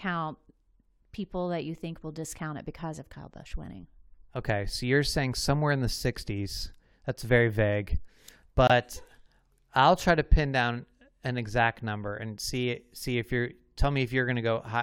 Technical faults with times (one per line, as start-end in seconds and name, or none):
8.67-8.71 corrupt frame muted